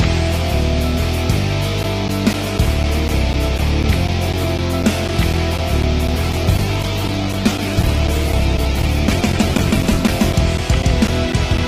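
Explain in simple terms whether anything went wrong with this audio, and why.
Two things went wrong. From 1.83 s to the end, there are periodic USB or driver dropouts: four times a second, something on the computer briefly stalls the audio connection, and a sliver of sound is lost and replaced by silence. You hear it as a steady ticking whenever there's sound.

Then from 6.27 s to about 10.11 s there's a call bitrate drop. The call decided its connection had gotten worse, so it squeezed the audio into far less data. That makes the sound rougher and more muffled, with the top end dulled, until it picks back up around 10.1 s.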